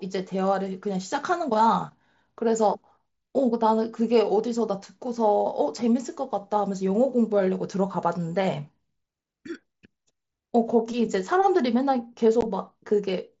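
At 12.41 s, unconcealed Bluetooth headset packet loss: roughly 15 ms of voice data between headset and phone never arrived, which fits two lost packets, and nothing was generated to cover the gap, so silence or an idle pattern took its place. The speech drops out in a brief hole with hard edges, a tiny chop in the sound that the wideband mSBC headset link carries at its usual 8 kHz bandwidth on either side.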